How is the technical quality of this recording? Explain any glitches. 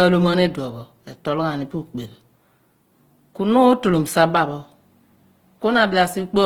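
The recording has a clear, steady codec problem running the whole way through. From start to finish there's plainly audible Opus compression damage, likely from a low-bitrate encode in Opus's music (CELT) mode, which fits something around 16 kbps. CELT keeps each band's energy but has to fill starved bands with folded or noise-like content, so the speech comes across grainy and rough rather than swirly. Bandwidth stays wide, with content reaching up to about 20.2 kHz.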